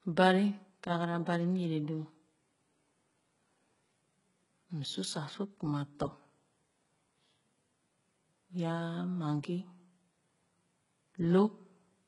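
All the way through, the speech has that synthetic, shimmery top end you get from HE-AAC compression, likely at a very low bitrate in the region of 12 kbps. The lower band is coded and the treble is rebuilt by copying it upward, so the highs reach up but don't match the harmonics beneath. The s sounds come out gritty and lispy, there's a metallic sheen, and nothing reaches above about 11.1 kHz.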